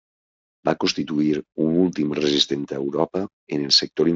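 Nothing here needs flagging; the speech comes across its Speex link with no fault worth pointing out.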